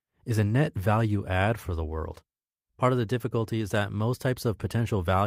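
The speech signal shows no technical faults at any point; level, continuity and timing all hold steady.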